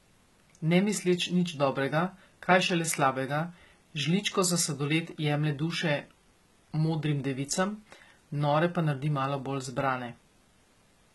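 Throughout, s sounds are gritty and lispy, and the treble sounds metallic and stops at 11.8 kHz. This is likely heavy HE-AAC compression rebuilding the top band from lower frequencies.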